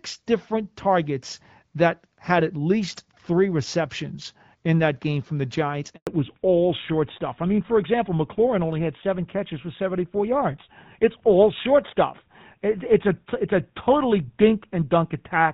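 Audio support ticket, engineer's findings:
Audio drops to silence 5.95–6.07 s, about 120 ms. Handover gap: call switched networks and no speech frames arrived until the new link came up.

From 6.07 s to the end, duller, rougher sound with nothing above 4 kHz, against the clear wideband sound before. Fallback to narrowband, which fits a move to a GSM full-rate codec.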